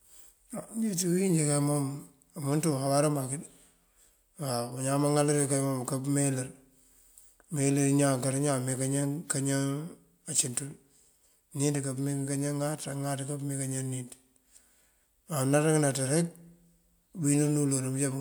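No technical faults can be heard anywhere in the speech recording, and the signal stays steady and intact throughout.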